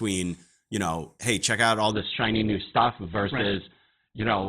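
From 1.92 s, after "hey check out all", the adaptive stream drops to a lower bitrate with no gap. Everything above 4.2 kHz vanishes and codec artefacts thicken.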